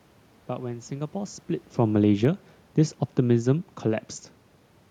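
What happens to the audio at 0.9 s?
Nothing goes wrong at 0.9 s: the speech carries on intact, with only the background noise of the room behind it.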